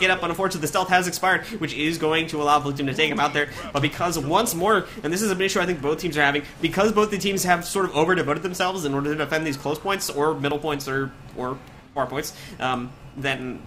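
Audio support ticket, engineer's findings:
No faults found on listening. No working path is noted beyond the audio itself, and nothing in it calls for follow-up.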